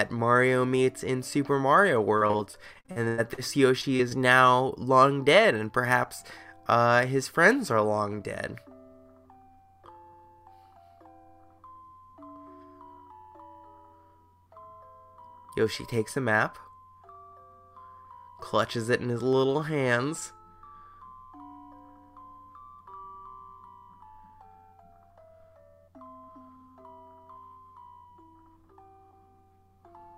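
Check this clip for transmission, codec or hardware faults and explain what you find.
Two transmission faults occur, both from network packet loss repaired by the receiver's concealment.

Repeated packet loss (robotic sound), 2.17 to 3.40 s: eleven gaps open in quick succession, the longest about 100 ms, and roughly 29 percent of that stretch is rebuilt rather than received. Each time data fails to arrive, the decoder extends the preceding sound to cover the hole, and the next hole comes before the audio settles. The result is choppy audio with pieces missing.

Short concealed packet loss, 3.82 to 3.85 s, 3.97 to 4.01 s and 4.09 to 4.13 s: three isolated dropouts of about 20 ms of missing data each follow just after the robotic stretch. Each time, the receiver patches the gap by continuing the last sound, pitched if voiced and as shaped noise if not, then blends back into the real signal. 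Each is heard as a brief smear or wobble, and a short sound falling in a gap can disappear.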